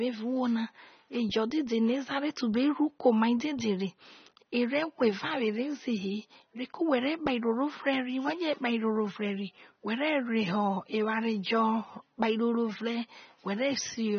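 From start to finish the speech has no content above 6.3 kHz and sounds dull and smeared, with a warbling, fizzy texture on sibilants and sustained sounds. This is likely AAC compression, AAC-LC at a low bitrate, which fits roughly 24 kbps.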